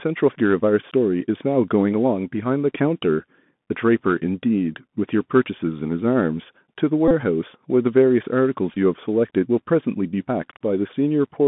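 A speech clip carried over a Bluetooth CVSD headset codec throughout. The sound is confined to roughly 150 Hz to 3.6 kHz, and the one-bit delta modulation at 64 kHz cannot track fast loud rises, so sibilants turn scratchy and a granular hiss sits under the voice. A Bluetooth headset packet repeated fault occurs twice. From 7.08 to 7.12 s, a short buzz near 267 Hz is heard as the last 3.75 ms packet is decoded again, which fits a run of about seven lost packets. A shorter buzz follows from 8.75 to 8.77 s, consistent with about three lost packets.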